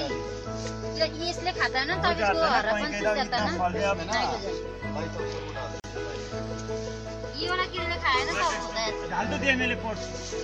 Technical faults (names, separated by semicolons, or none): gap at a join of encoded pieces